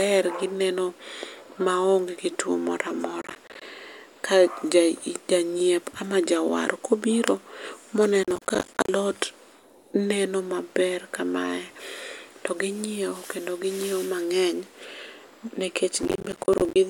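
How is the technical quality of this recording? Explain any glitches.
Processor overload crackle occurs three times in this speech clip: 3.22–3.66 s, 8.24–8.89 s (just after "jawar ka obiro ma"), and 16.03–16.76 s. Each time, the processor missed buffer deadlines again and again, roughly 20, 30 and 40 of them respectively, with buffers of around 10 ms. Each missed buffer became a hard-edged silent gap, and the gaps together make a gritty crackle that tears through the speech until the load eases.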